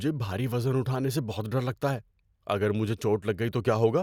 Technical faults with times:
none

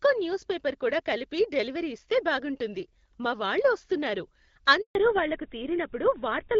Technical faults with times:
4.81-4.95 handover gap
4.95-6.60 fallback to narrowband

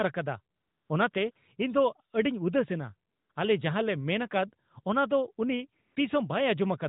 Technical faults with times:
0.56-1.36 AMR comfort noise
3.10-3.36 AMR comfort noise
5.82-5.96 AMR comfort noise

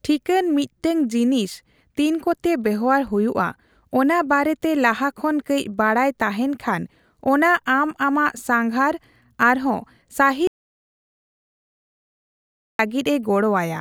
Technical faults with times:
10.47-12.79 audio dropout to silence

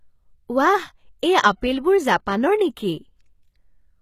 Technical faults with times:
0.00-4.01 HE-AAC compression

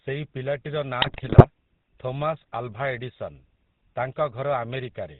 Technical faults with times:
0.00-5.19 GSM full-rate codec
1.02-1.47 GSM bit errors

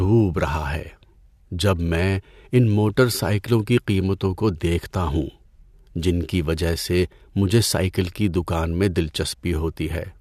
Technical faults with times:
none

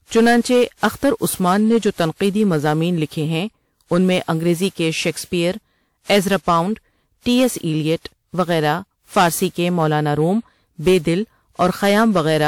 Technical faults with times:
0.00-12.47 hard clipping
0.00-12.47 generation loss

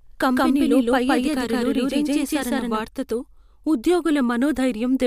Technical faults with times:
0.00-2.80 doubled audio track

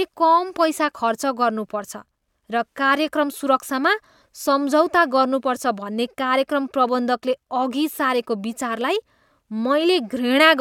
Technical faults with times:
none

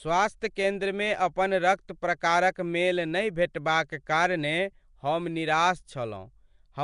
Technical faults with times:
0.00-6.84 Nellymoser compression

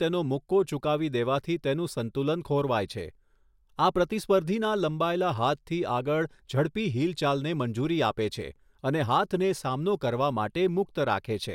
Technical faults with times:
none

